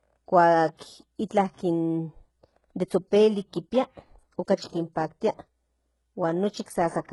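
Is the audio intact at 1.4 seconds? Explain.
No. Throughout the clip, including 1.4 s, this is low-bitrate audio saved at a high bitrate. Nothing sounds above 11.5 kHz. A likely earlier low-bitrate encoding removed it, and re-encoding cannot restore it.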